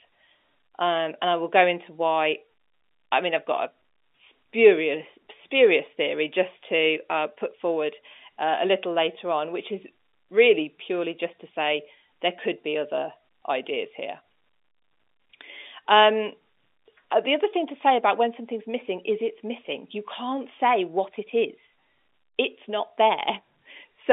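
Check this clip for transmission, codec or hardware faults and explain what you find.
No transmission, codec or hardware faults can be heard here.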